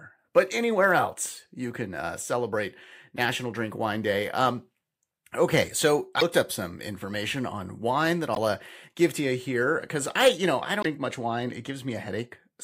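Brief blips, each about 40 to 50 ms, break into the speech at 6.18 s after "okay so", 8.32 s after "information on wine that", and 10.81 s after "I you know I". This is damaged data in a compressed stream: corrupted frames are misread, and the decoder loses sync until it finds the next valid frame header.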